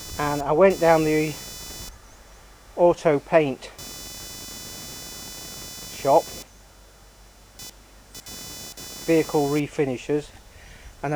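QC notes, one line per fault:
Throughout: computer activity noise, a buzzing, chirpy whine pulsing at around 500 times per second, sitting roughly 20 dB below the sound. It tracks the computer's processing load rather than the audio, as load swings disturb the ground shared with the audio circuit.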